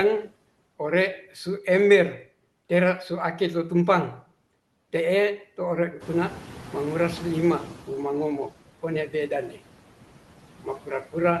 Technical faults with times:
0.00-11.40 noise suppressor artifacts
6.00-8.35 noise suppressor catching up
9.07-9.31 speech cut by the noise suppressor

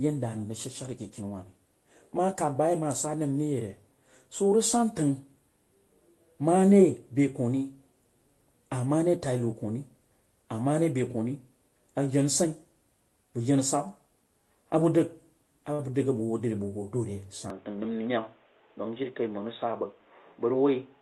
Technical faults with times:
15.73-15.81 short stall from a late packet
17.50-21.02 input switched to a poorer device
17.78-18.17 jitter buffer speed-up

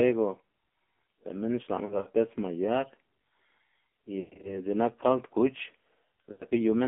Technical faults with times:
0.00-6.88 AMR narrowband mobile codec
1.86-2.09 lost AMR speech frames
4.20-4.60 lost AMR speech frames
6.32-6.44 lost AMR speech frames

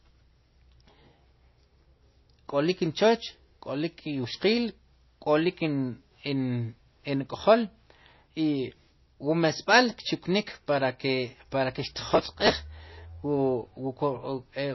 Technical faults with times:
0.00-14.74 MP3 compression
12.10-12.51 processor overload crackle

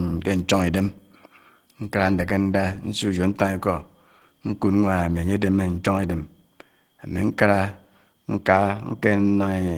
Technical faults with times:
0.00-9.78 Opus compression

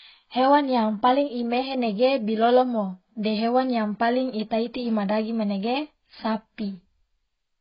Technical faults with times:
0.00-7.60 AAC compression

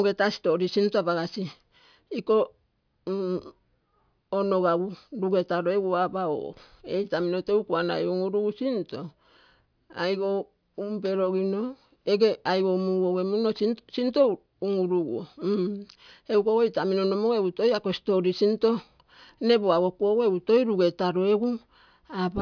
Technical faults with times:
none

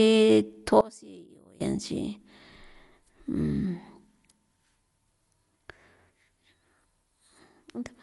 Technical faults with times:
0.00-8.03 Dolby Digital compression
0.81-1.61 one channel inverted

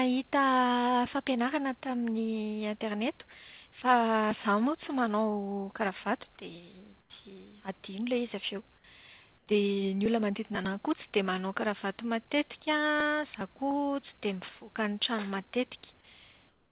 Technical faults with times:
7.01-7.10 comfort noise in place of the background
9.38-9.47 comfort noise in place of the background
16.49-16.71 comfort noise in place of the background

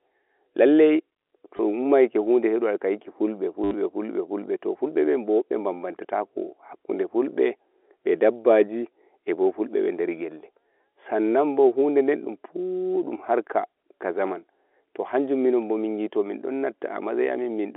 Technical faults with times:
1.57-1.59 packet loss with last packet repeated
3.64-3.74 packet loss with last packet repeated

